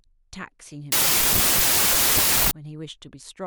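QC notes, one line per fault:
0.92–2.51 s, wrong sample width: sounds like packed 24-bit data read as 32-bit. Mismatched bytes bury the speech in loud noise. It runs 1.33 times fast and high.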